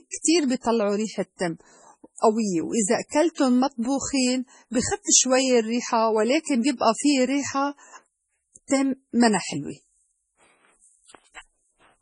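Throughout, the speech sounds watery and swirly, with metallic chirps on s sounds, smeared attacks and nothing above 10.4 kHz. This is likely heavy MP3 compression, at a bitrate near 24 kbps. Starved of bits, the encoder cuts the treble and drops weak frequency lines from frame to frame.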